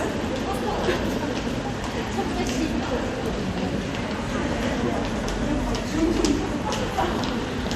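Sounds, with no technical faults audible anywhere.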